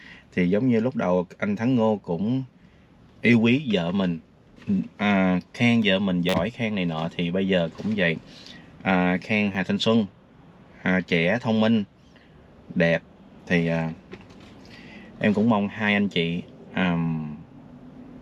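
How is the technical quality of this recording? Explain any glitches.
Two short repeated-buffer glitches interrupt the recording. The first runs from 6.29 to 6.34 s, the second from 9.53 to 9.55 s. In each, fresh audio failed to reach the output in time, so the device replayed its last block, about 10.7 ms long, which fits a 512-sample buffer. The first glitch repeats roughly four extra times, dropping about 40 ms. The second repeats roughly twice, losing about 20 ms. Each is heard as a click or brief buzz with hard joins at every repeat.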